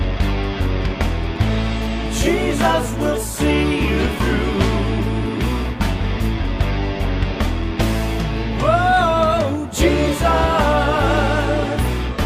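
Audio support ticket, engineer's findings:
Nothing stood out on listening; no symptom was heard that would point to a component or mechanism needing attention.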